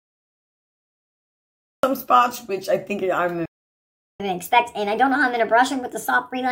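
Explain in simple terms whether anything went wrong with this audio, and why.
Three things went wrong, one after another.

The first is a cut-off start. Nothing plays for the first 1.83 seconds. Then the sound appears suddenly, already in progress, with no gentle beginning. The recording or stream began late and caught the sound partway through.

Next comes a playback stall. At 3.46 seconds the sound stops dead for about 0.74 seconds and resumes at 4.20 seconds. The player likely ran out of incoming data, or was held up, and output silence until it recovered.

Finally there is catch-up at higher speed. From 4.20 seconds to the very end, the audio plays 1.25 times too fast. The pitch rises too, by roughly four semitones. The player is rushing through its backlog to make up the lost time.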